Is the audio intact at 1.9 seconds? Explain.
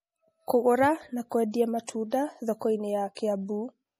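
No. Just before 1.9 seconds there is pre-echo, from 1.86 to 1.88 s. A short hiss, about 28 ms long, arrives ahead of a sharp attack in the speech. The codec spreads its quantisation noise across a whole block. The attack falls late in that block, so noise sized for the loud onset also fills the quiet gap before it. The attack itself sounds softened and smeared.

That moment also carries the MP3 compression heard throughout the clip. Nothing sounds above 15.3 kHz, where the encoder has cut the treble. Weak frequency lines drop in and out between frames. This gives a watery, swirly texture, with metallic chirps on s sounds. The damage is plainly audible. It fits a low bitrate, around 40 kbps. Starved encoding is the likely cause.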